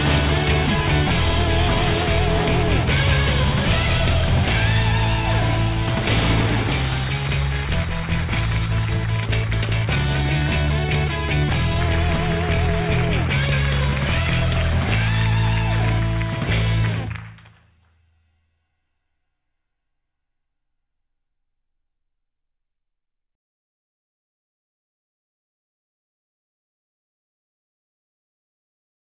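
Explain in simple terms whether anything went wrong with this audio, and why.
Nothing went wrong with this audio, so there is nothing to explain.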